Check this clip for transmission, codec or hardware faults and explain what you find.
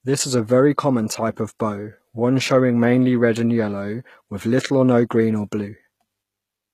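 There's one fault, and it runs the whole length of the speech: it sounds like HE-AAC compression, likely the cause. The lower band is coded properly, but the treble is rebuilt from copied lower bands under a coarse envelope, so it stays bright without really matching. Sibilants come out gritty and metallic, and the damage is plainly audible, which fits a low bitrate around 20 kbps. Nothing survives above about 14.9 kHz.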